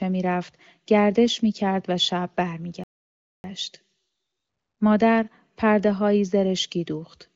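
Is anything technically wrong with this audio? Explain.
Yes, there's a playback stall. At 2.84 s the speech just cuts to silence for about 0.6 s, then carries on at 3.44 s. That's most likely the player running dry of data or its thread getting blocked. It's separate from the HD Voice style AMR wideband band limit, with nothing above 7 kHz.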